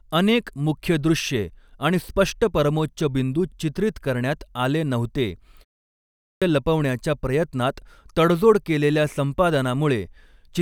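Speech, with a clipped start after a pause: after "चित्रित करण्यात आले नव्हते" and a 0.3 s gap, the output device has dropped into sleep and needs time to wake, so 5.86 to 6.42 s is swallowed, about 0.56 s lost before "लपवण्याच्या प्रयत्नात तडजोड केलेल्या". The waveform shows a flat line running straight into full-height speech with no onset ramp, and the spectrogram shows a hard vertical edge where energy appears mid-syllable.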